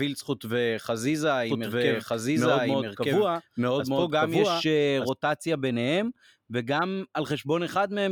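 From 1.49 to 5.09 s, a doubled audio track appears. A second copy of the speech, about as loud, trails by roughly one second, likely from a duplicated capture path.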